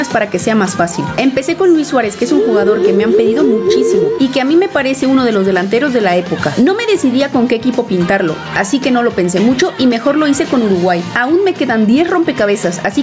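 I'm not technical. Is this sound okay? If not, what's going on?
No, not quite. All the way through, the level gets pulled down each time something loud comes in, so the level keeps breathing in and out. That's called gain pumping. The likely cause is that the microphone level was set far too high, with a fast limiter constantly yanking it back down. The result sounds squashed, with loud and soft parts pushed unnaturally close together.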